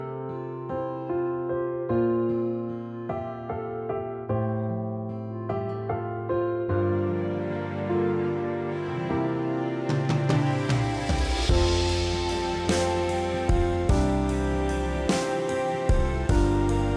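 Nothing here jumps out as a technical fault, so there's no problem to walk through in this one.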